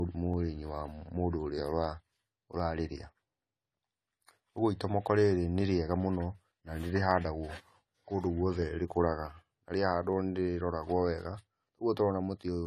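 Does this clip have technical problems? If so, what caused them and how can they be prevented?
Yes. The speech is dull and smeared throughout with nothing above 14 kHz, which sounds like AAC compression, likely at a low bitrate of about 32 kbps. Encoding at a higher bitrate would prevent it.

From 0.34 s to 12.39 s there is a click every 0.75 s, about fifteen in total. These are likely clock drift buffer slips: two unsynchronised clocks disagree by a few hundred ppm, so roughly fifteen samples get dropped or repeated each time. Locking both devices to one word clock, or resampling between them, would stop it.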